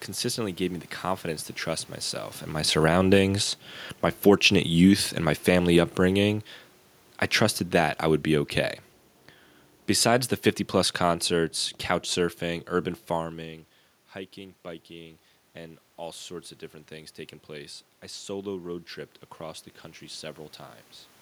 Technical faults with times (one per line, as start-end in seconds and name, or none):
2.68-8.63 automatic gain falling